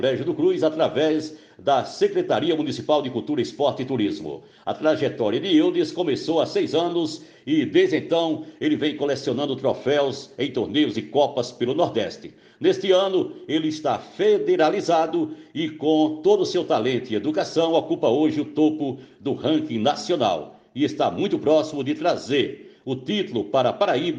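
No dropouts, clicks, distortion or other technical faults are audible anywhere in the recording.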